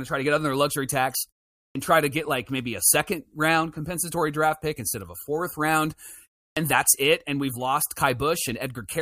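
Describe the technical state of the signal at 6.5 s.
At 6.52 s, just after "of a fourth round" and a pause of 0.33 s, there is a clipped start after a pause. The output device appears to drop into an idle state during the brief silence and needs about 46 ms to wake, so the opening of the next phrase, "that's it and we've", is swallowed up to 6.57 s and bursts in abruptly. Unlike a mid-phrase dropout, the loss falls only at the onset following silence.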